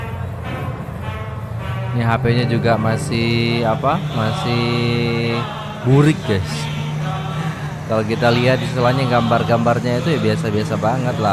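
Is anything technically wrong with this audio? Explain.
No, nothing technically wrong is audible in this audio.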